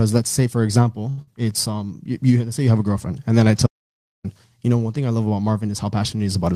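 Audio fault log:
1.09–1.32 s, short stall from a late packet: just after "let's say for", a packet arrived late and the jitter buffer emptied, so the receiver held the last sound for about 80 ms, adding 80 ms of delay, then resumed with nothing skipped.
1.21–1.29 s, burst of packet loss: inside that stall, consecutive packets were lost or came too late to play. About 55 ms was filled by extending and fading the last sound, and about 60 ms is missing before "it's um you you".
3.67–4.24 s, audio dropout to silence: after "girlfriend and then I" the signal drops to silence with no room tone for about 0.58 s, until "you know one thing". The input was likely cut by a disconnect, failed link or mute, leaving silence recorded.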